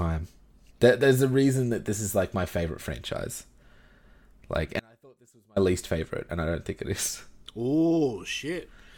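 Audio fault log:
4.80–5.56 s, audio dropout to a faint residue: the speech cuts out abruptly for about 0.77 s, leaving only a faint leak of sound around 35 dB below normal level, most likely because the signal was lost while the downstream path stayed live.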